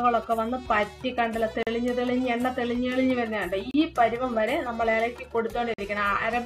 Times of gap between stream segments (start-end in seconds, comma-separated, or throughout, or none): 1.63-1.67, 3.71-3.74, 5.74-5.78